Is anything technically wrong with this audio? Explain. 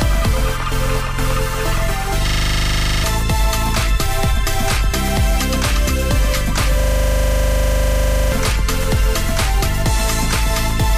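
Yes. There are two system hang loops, from 2.28 to 3.04 s and from 6.8 to 8.32 s. In each, the audio driver stalled while the hardware kept replaying the same 40 ms of its ring buffer. That produces a rough buzz at 25 Hz in place of the real audio, and roughly 0.7 s and 1.5 s of sound are lost. On a waveform, one identical 40 ms shape repeats. A spectrogram shows evenly spaced vertical stripes and a comb of lines 25 Hz apart.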